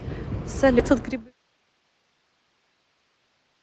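At 0.79 to 0.81 s the speech lurches forward with no pause, two fragments butted almost directly together as though a piece had been snipped out. This is a skip ahead: speech that had already queued up was thrown away, in transit or when the jitter buffer overflowed, and playback jumped to the later material. Roughly 0.7 s of speech is gone, nothing fills the seam, and the listening delay shrinks by about the same amount.

From 0.92 to 1.81 s the talking sounds slightly rushed, about 8% fast, yet the pitch stays where it was. That is jitter buffer speed-up. After the backlog, the buffer still held more audio than its target, so the receiver trimmed tiny slices a pitch period or so long, over and over, shaving off something like 70 ms in total. Partway through, starting near 1.0 s, the level also eases smoothly down through 1.34 s as a deliberate fade-out. Underneath, the band stops at 8 kHz with coding grain, consistent with Opus at around 24 kbps.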